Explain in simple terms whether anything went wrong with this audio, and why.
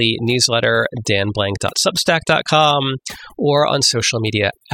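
Overdone noise removal is the problem, and it runs through the whole recording. A noise reduction tool was set too strong, so it shuts individual frequency bands down or off whenever they come close to what it takes for background noise. The background drops away, but what remains breaks into twinkling, warbling specks, and the quieter parts of the speech are cut along with the noise.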